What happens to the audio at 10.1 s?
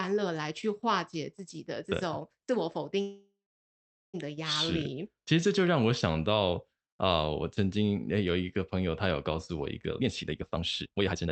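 Speech runs hurried, at 152% speed with unchanged pitch, from 9.92 to 11.32 s: a jitter buffer speed-up repeatedly trimming pitch-period slices to shed excess delay.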